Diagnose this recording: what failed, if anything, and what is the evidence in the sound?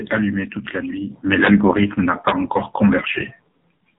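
The speech passed through the AMR narrowband mobile codec at a low mode, in a mobile-call path. The codec stage rebuilds the voice from a vocal-tract model excited by a sparse set of pulses in each 5 ms. The damage is heavy throughout: the voice sounds buzzy and synthetic, and nothing reaches above 3.8 kHz. That degree of coarseness points to one of the lowest AMR-NB modes, around 6 kbps.

An integer overflow occurs at two points, 1.45 to 1.48 s and 2.28 to 2.30 s. Each sounds like a sharp, violent crack on a loud peak. Some gain or summing stage, probably in sample-format conversion or the processing arithmetic, pushed those peaks only about 1 dB past full scale. Instead of saturating, the values wrapped around to the opposite sign. The waveform jumps across the whole range, which is far harsher than ordinary clipping.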